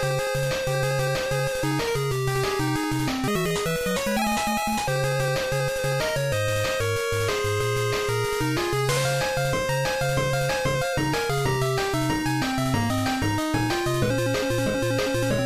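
From 3.28 to 4.87 s there's a section at the wrong speed: it runs about 1.58 times too fast, so the sound jumps up roughly seven semitones and hurries along, then snaps back. Most likely that stretch was played against the wrong clock.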